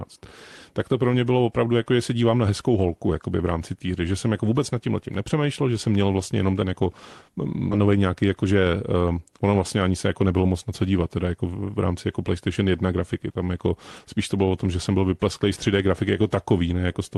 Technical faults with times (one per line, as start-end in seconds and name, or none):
7.71-7.73 skip ahead
7.81-9.38 jitter buffer speed-up